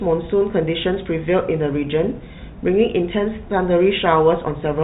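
Speech heard through G.711 telephone coding, with nothing above 4 kHz, and nothing technically wrong with it.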